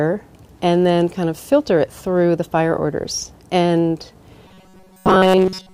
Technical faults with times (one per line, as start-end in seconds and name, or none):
4.48-5.74 robotic sound from repeated short buffers